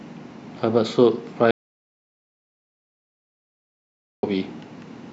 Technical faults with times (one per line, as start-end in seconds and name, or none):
1.51-4.23 audio dropout to silence